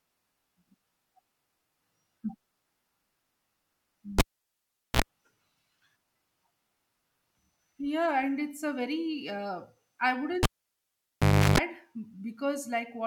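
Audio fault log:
4.19–5.02 s and 10.43–11.58 s (after "a very uh I"), cable pulled and plugged in: pop, near silence, then tip-contact mains buzz (60 Hz, then 50 Hz) and another pop, unlike a plain dropout.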